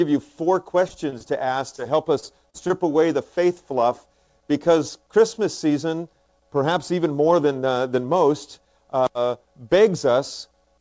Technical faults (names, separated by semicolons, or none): short concealed packet loss